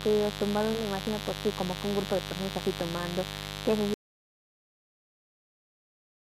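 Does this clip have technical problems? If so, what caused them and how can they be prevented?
Yes. A mains buzz runs through the whole recording. It is a steady, raspy tone built on 50 Hz, with harmonics climbing well into the kilohertz range. It sits high in the mix, roughly 10 dB below the speech. Sharp switching spikes from a dimmer, rectifier or poor shielding are entering the signal twice per mains cycle. That is what makes it rasp rather than hum. Prevent it with balanced, shielded cabling, kept away from dimmers and power supplies.

At 3.94 s there is an audio dropout to silence, and it lasts until the end of the clip. The speech stops abruptly. What follows is silence, with no room tone left. The input was likely lost, through a disconnected device, a failed link or an accidental mute, while the recorder kept writing silence. Anything spoken after that point is gone. Prevent it by securing connections and monitoring levels live while recording.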